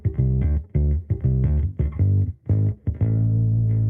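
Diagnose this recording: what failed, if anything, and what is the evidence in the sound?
Nothing in the recording stood out as a failure on listening, and no stage of the chain left audible evidence of a problem.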